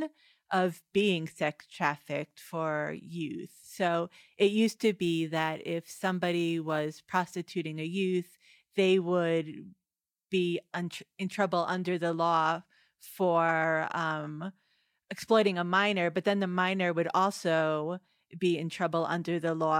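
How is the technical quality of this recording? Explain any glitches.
The recording has one audible fault, confined to a stretch early in the speech.

Sample clock jitter runs from 4.67 to 7.45 s. During this stretch the converter's timing wobbles by a few microseconds, so each sample is captured a little early or late. Where the waveform changes fastest, that timing error becomes an amplitude error, leaving a noise floor roughly 35 dB below the speech. It comes across as a grainy hiss riding on the louder and brighter parts of the voice and falling away in pauses.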